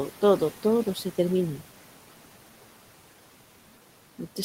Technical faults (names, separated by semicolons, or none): noise suppressor artifacts